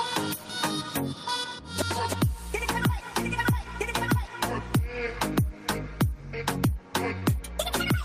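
A short concealed packet loss occurs at 7.19 to 7.23 s: about 20 ms of the stream failed to reach the decoder in time, and the receiver patched the gap with 20 ms of synthesised fill, extending the preceding sound from its last pitch or as shaped noise before crossfading back into the real audio. The result is a brief smear or wobble near the end of the audio, where a very short sound can drop out.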